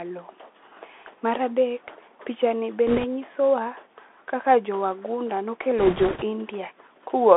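A speech recording carried over a Bluetooth CVSD headset codec, which confines it to roughly 250 Hz to 3.5 kHz and leaves plainly audible damage: a granular hiss under the voice, scratchy sibilants and slope-overload distortion where loud high content outruns the adaptive step size, consistent with 64 kbps one-bit delta modulation. Bit errors on the Bluetooth voice link occur from 2.87 to 3.05 s and again from 5.78 to 6.24 s, at a rate of a few percent, adding a rushing, crackly noise rather than sharp clicks, since each flipped delta bit carries little weight and its effect decays.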